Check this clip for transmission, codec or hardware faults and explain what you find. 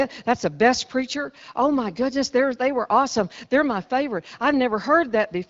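The speech arrives intact over what sounds like an AMR wideband (HD Voice) path, with content stopping near 7.5 kHz and only the light coding texture expected at a rate around 12.65 kbit/s, and no faults are present.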